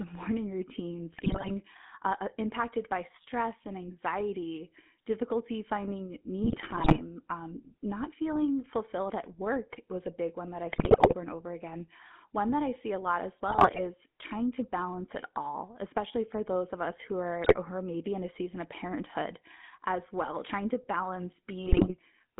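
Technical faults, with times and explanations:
Throughout: GSM full-rate codec. The speech is confined to a narrow line band of roughly 150 Hz to 3.5 kHz and carries a plainly audible buzzy, gravelly roughness, which fits the 13 kbps full-rate coder. The codec rebuilds the voice from a vocal-tract filter excited by sparse, regularly spaced pulses, so the fine structure of the voicing is lost. Unlike added noise or clipping, the grit follows the voice itself.
1.12–1.51 s, 6.44–7.01 s, 10.72–11.14 s, 13.48–13.81 s, 17.44–17.56 s, 21.66–21.93 s: GSM bit errors. In each stretch the speech breaks into squawks, pops and gargling. Corrupted filter, pitch and gain parameters reach the decoder, so whole frames come out with a bent spectrum or a sudden jump in level. Packet loss would leave gaps or smeared repeats. Here the decoder keeps producing sound, but it is wrong, with brief bursts that the talker could never make.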